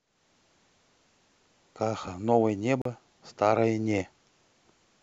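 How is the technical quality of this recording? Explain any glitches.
One glitch stands out in the speech. At 2.82 to 2.86 s the sound cuts to silence for about 37 ms, then resumes further on, as if it had kept playing. This is likely a Bluetooth dropout, where a couple of late wireless packets were discarded before reaching the headphones.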